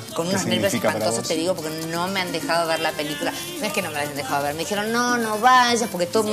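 No technical faults can be heard anywhere in the clip. There is nothing to locate in time or describe here.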